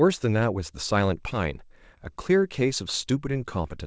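Short concealed packet loss at 1.30 to 1.33 s in this speech clip: about 20 ms of the call arrived too late to decode, and the receiver papered over the gap by extending the preceding sound before fading back into real audio, leaving a brief smear. Nothing above 8 kHz comes through, which fits a G.722 call codec.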